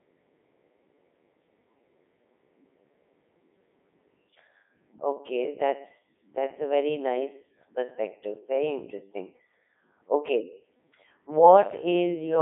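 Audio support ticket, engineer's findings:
Codec 2 vocoder, whole clip: robotic, buzzy speech, band 150 Hz–3.7 kHz, nothing above 3.8 kHz. Voice resynthesised from sine waves, fits 3.2 kbit/s mode. Unlike a waveform codec, the waveform is not kept.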